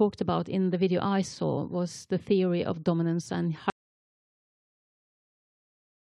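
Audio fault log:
3.7 s to end: audio dropout to silence. The input was likely lost, perhaps through a disconnected device or failed link, while the recorder kept writing silence. The speech cuts off mid-flow and never returns, leaving complete silence with no room tone through the remaining 2.4 s.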